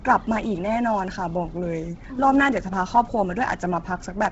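From start to finish the speech has a breathy, grainy edge, and nothing reaches above about 7.8 kHz. That's likely Bluetooth LC3 compression working hard at a low bitrate, roughly 16 kbps, with 10 ms frames, zeroing much of the upper band and refilling it with noise.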